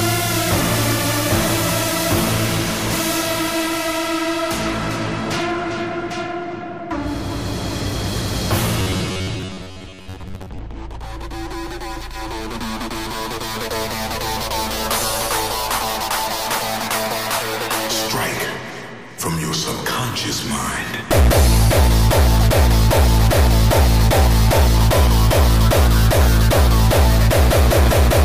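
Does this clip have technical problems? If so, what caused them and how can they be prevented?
Yes. Robotic sound from repeated short buffers appears from 8.80 to 10.60 s. The sound turns into a rigid, metallic buzz at 93.8 Hz, likely because new audio arrived too seldom, so the last 10.7 ms kept repeating while about half the real audio was skipped. A larger receive buffer and steady network and processing headroom would keep audio arriving in time and prevent it.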